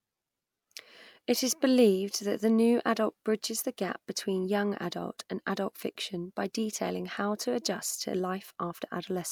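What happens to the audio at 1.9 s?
Nothing goes wrong at 1.9 s; the speech there plays through cleanly, with no dropout, click or distortion.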